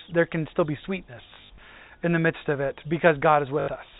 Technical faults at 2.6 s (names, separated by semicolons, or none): none